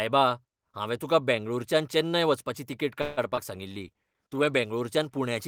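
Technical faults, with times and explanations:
3.01–3.19 s, call audio freeze: right after "बेंगळूरच्यान चेन्नय वचपाची तिकेट" the last sound is stretched for about 0.16 s, likely because delayed packets emptied the jitter buffer. Nothing is lost, just delayed.
3.29–3.33 s and 3.35–3.39 s, short concealed packet loss: two roughly 20 ms holes are bridged by extending the preceding sound, leaving brief smears before blending back.
3.57–4.67 s, call bitrate drop: the encoder falls from 32 to 18 kbps for about a second, so coarser coding makes the sound rougher and duller until it recovers.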